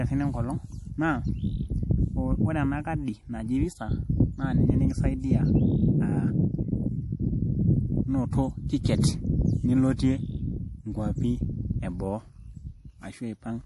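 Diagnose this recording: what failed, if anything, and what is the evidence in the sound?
The codec stage failed: MP3 compression artefacts run through the whole speech recording. Nothing is present above 11.5 kHz, a hard cut-off that is likely the encoder discarding the treble when bits ran short, as they would at a low bitrate around 48 kbps. The damage is plainly audible as a watery, swirling texture. Weak frequency lines are zeroed and return from frame to frame, which also gives sibilants a metallic edge and smears onsets.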